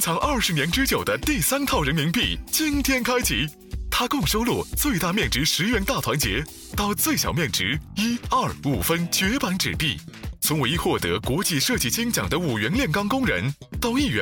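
No technical faults can be heard at any point, so there is nothing to describe in time order.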